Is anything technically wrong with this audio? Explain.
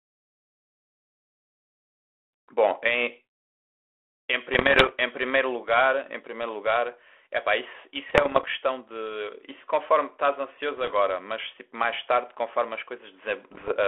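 Yes. There are bit errors on an ADPCM link at 4.54–4.93, 8.08–8.46, 10.77–10.95 and 13.52–13.75 s. Flipped bits throw off the decoder's step size and predictor, so each error rings on briefly. The result is pops and rough bursts with short level jumps.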